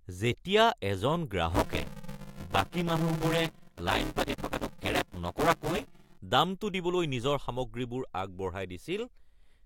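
Buffer tearing runs through this speech clip from 1.50 s to 6.18 s, ending just before "দামটো দিবলৈ নিজৰ". Over that stretch the sound has a robotic buzz at 172 Hz, which fits a 256-sample buffer. The writing side and the playback hardware have slipped out of step, so in each period roughly half the buffer still holds audio from about 10 ms earlier. Hard joins on both sides of that stale section repeat at the buffer rate and produce the buzz.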